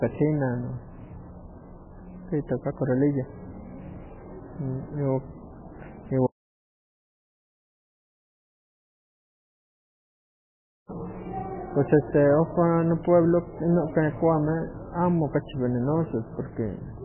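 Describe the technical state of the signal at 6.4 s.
At 6.4 s the signal is in an audio dropout to silence running from 6.27 s to 10.89 s, about 4.6 s of silence with no room tone. The input feed was likely lost while the recorder kept writing, so the speech stops abruptly and anything spoken then is missing.

Underneath this, heavy MP3 compression runs through the whole clip. Nothing survives above 3 kHz, and the sparse, watery coding points to a very low bitrate, in the region of 8 kbps. The likely cause is an encoder starved of bits, cutting the treble and dropping weak spectral lines frame by frame.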